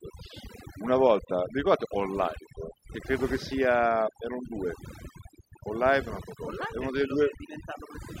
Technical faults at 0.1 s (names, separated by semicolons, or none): overdone noise removal